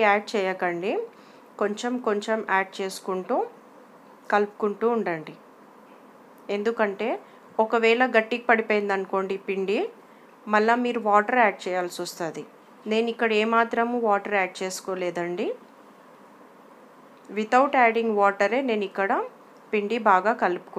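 No audible technical faults anywhere in the recording.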